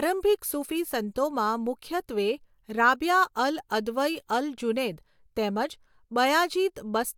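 Nothing in the recording stood out as a technical problem on listening.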